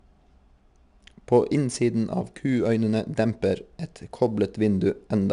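Throughout the speech, 4-bit ADPCM compression leaves a plainly audible gritty hiss that rises and falls with loudness, roughening sharp onsets. A spectrogram shows broadband noise tracking the speech energy and nothing above 10.6 kHz, which fits a data rate near 89 kbps.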